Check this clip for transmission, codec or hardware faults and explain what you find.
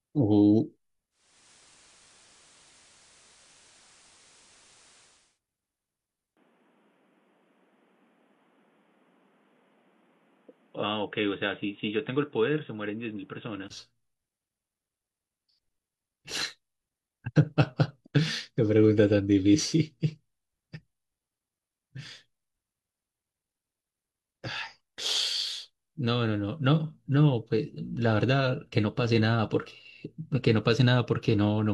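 Two faults stand out in this speech clip, one on the broadcast path and one at the input.

From 1.10 to 5.40 s, the sound gains a steady hiss, roughly 30 dB under the speech, and the level shifts by about 1 dB. This is digital radio blending to analogue: the receiver lost its digital stream and cross-faded over about 415 ms to the FM version of the station, then faded back at 5.40 s.

From 6.35 to 13.70 s, the speech becomes duller and boxier, with a level drop of about 5 dB and a new noise floor roughly 35 dB down. A 20 ms gap marks the change at 6.35 s. The likely cause is an input switched to a poorer device, such as a second microphone or a headset running a narrowband call profile, before the original input returned at 13.70 s.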